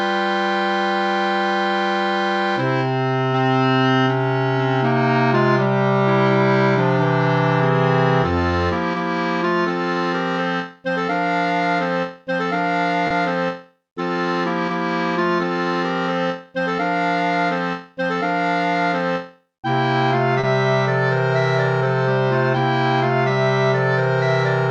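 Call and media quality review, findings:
Short stall from a late packet, twice: 13.07–13.12 s and 20.40–20.45 s. Sound briefly hangs, slight buzzy smear. Jitter buffer ran dry waiting on a late packet, so the receiver stretched the last bit of audio, about 30 ms each time, then picked up where it left off. Nothing actually dropped, but playout delay creeps up about 30 ms per event. Worth a look at buffer sizing and network jitter.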